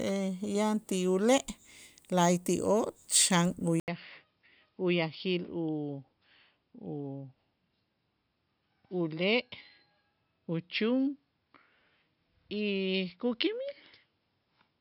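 Speech; after "la'ayti'oo' xan" at 3.80 s, an 80 ms gap, then duller, roughly 10 dB quieter sound cut above 5.4 kHz, with faint new noise, likely an input switched to a poorer device.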